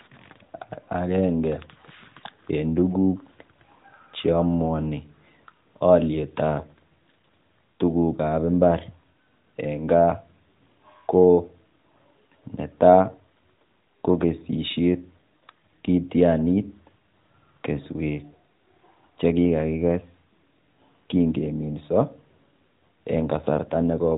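It's a speech recording carried over the AMR narrowband mobile codec, so it has the usual phone-line ceiling around 4 kHz, and there's nothing technically wrong to point to anywhere in it.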